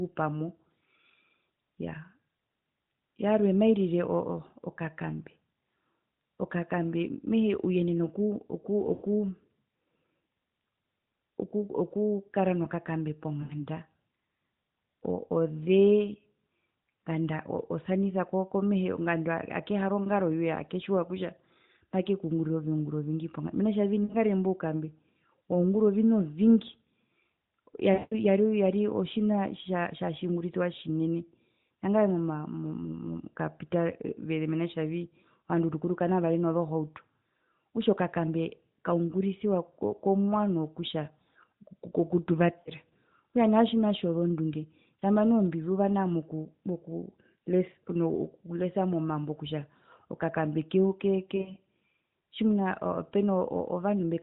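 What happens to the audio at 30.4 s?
Nothing goes wrong at 30.4 s; the speech passes through that moment intact.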